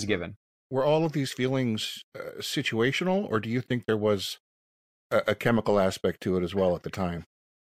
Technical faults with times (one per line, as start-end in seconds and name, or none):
none